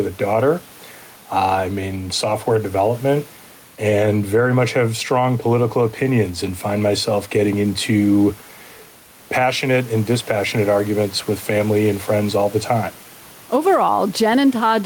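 Gain pumping runs through the whole of this speech recording, with the level swinging by roughly 5 dB, and the room noise sits about 29 dB below the speech. The likely cause is excessive microphone gain being pulled down by a fast limiter or compressor, which squashes loud and soft passages together.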